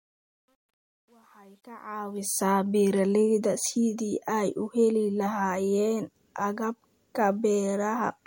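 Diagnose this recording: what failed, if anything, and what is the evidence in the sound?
Gritty fade-in from 0 to 2.44 s, worst before 1.9 s: truncation distortion at sample-format conversion, with bits dropped and no dither, which fits 10-bit resolution.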